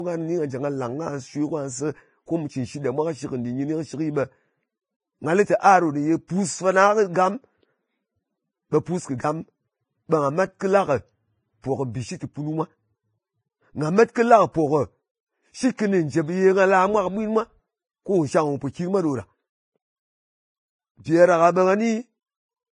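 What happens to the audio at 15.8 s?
A brief hiss swells up just ahead of a sharp attack at 15.77 s, about 18 ms long, leaving the onset soft and smeared. This is pre-echo: the transform block containing the attack spreads its quantisation noise evenly, so the quiet instant before the loud onset gets noise sized for the loud part.

Across this moment the speech also sounds hissy and grainy, with nothing above 10.5 kHz. That points to a low bitrate of around 21 kbps, heavily damaged by what is likely Vorbis compression, where coarse treble quantisation turns fine detail into noise.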